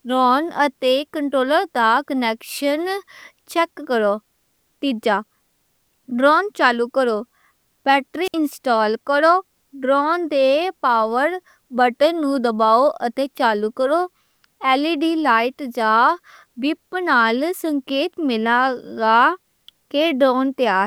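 A wireless microphone squelch dropout occurs at 8.23 s, lasting until about 8.35 s. The FM radio link between the transmitter and receiver weakened enough that the receiver's squelch closed and muted its output rather than pass on noise. It is heard as a short surge of hiss, then a gap of near silence of about 61 ms, after which the speech comes back.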